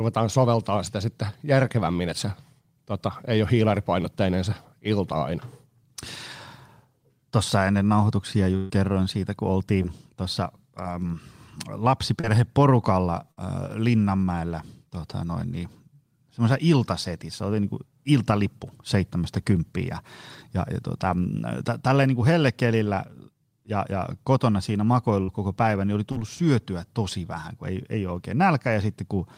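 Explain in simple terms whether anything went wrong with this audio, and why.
Burst of packet loss at 8.56–8.70, 13.31–13.38 and 25.23–25.29 s: chunks of the call were lost or arrived too late, so the receiver stretched and faded the last sound, then jumped ahead.

Short concealed packet loss at 9.82–9.85, 12.20–12.24 and 26.12–26.17 s: tiny pieces went missing and were patched by continuing the last sound, leaving a brief smear or wobble.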